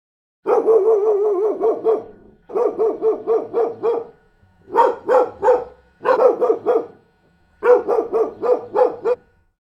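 Compressed frames are skipped at 2.49 s, 6.16 s and 9.13–9.15 s, jumping the sound ahead roughly 200, 100 and 200 ms in whole 23.2 ms frames. Each join is a sudden jump ahead in the sound, seen as an abrupt texture discontinuity on the spectrogram.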